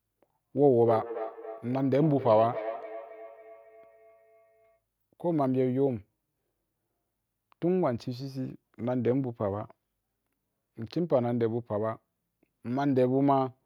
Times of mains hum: none

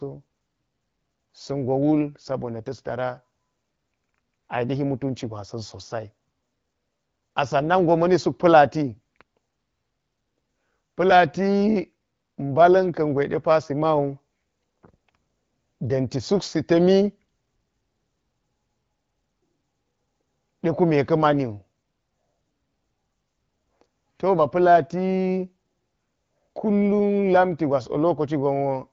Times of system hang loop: none

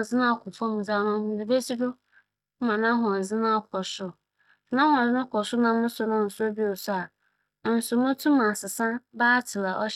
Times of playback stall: none

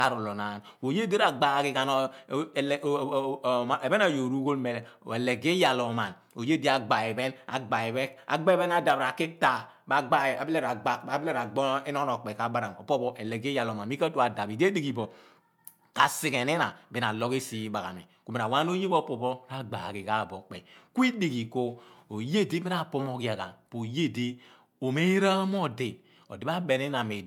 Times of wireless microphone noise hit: none

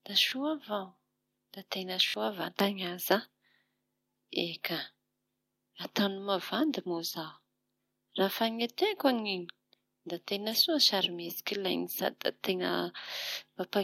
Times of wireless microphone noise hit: 10.51-10.55

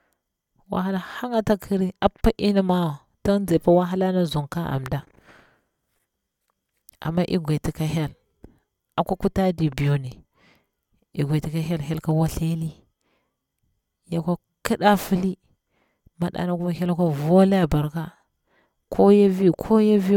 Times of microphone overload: none

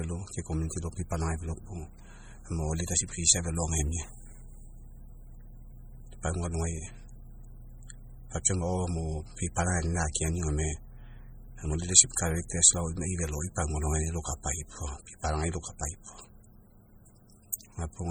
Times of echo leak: none

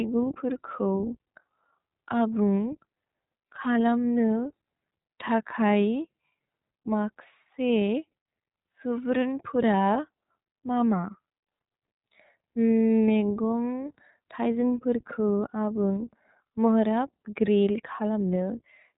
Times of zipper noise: none

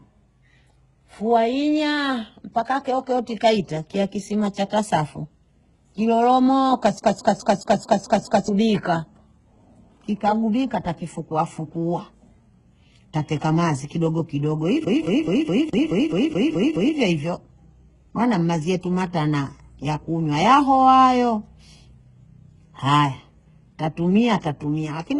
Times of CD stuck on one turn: 6.99-8.48, 14.85-16.97

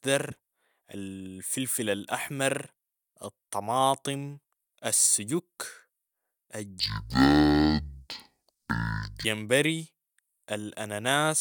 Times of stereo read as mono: 6.80-9.25

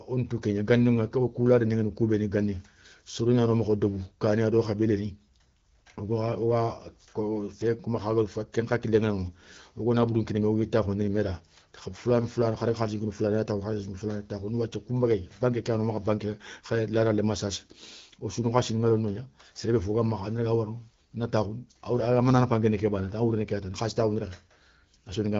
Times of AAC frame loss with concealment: none

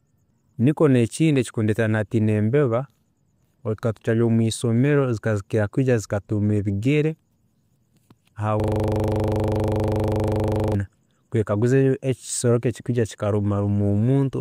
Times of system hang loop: 8.60-10.75

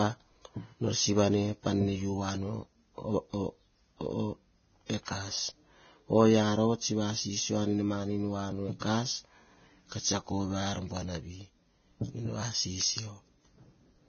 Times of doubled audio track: none

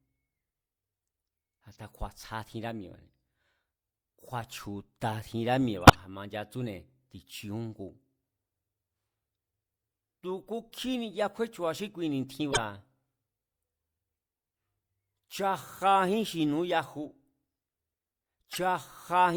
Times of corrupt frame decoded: 5.82-5.96, 12.51-12.59, 18.52-18.57

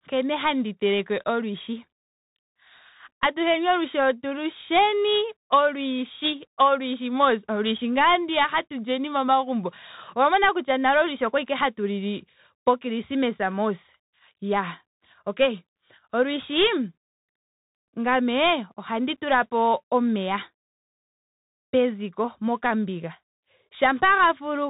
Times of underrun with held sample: none

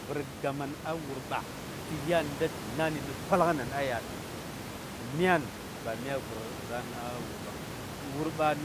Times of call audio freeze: none

